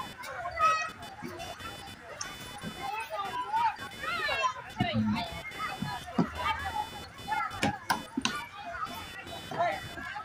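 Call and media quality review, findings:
Computer activity noise, whole clip. Buzzy chirping with a pulse rate of roughly 500 Hz, sitting around 15 dB under the wanted sound. It tracks machine load, not the program material. Probable component: the shared ground between the audio path and the CPU, GPU or mouse. Load swings shift that ground reference, and the audio circuit picks them up. Worth checking ground isolation or moving the interface off that bus.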